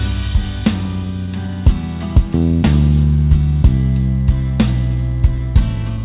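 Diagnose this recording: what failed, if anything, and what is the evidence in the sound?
Jitter buffer speed-up in the call's receive path, from 5.61 to 5.98 s. Over that stretch the sound runs about 10% fast while its pitch stays put, so it comes across as briefly hurried. After delayed packets arrived in a bunch, the buffer held more audio than its target, and the receiver trimmed short pitch-period-length pieces back to back, about 40 ms in total, to pull the delay down. The band stops at 4 kHz throughout, which fits the narrowband G.711 A-law codec on this path.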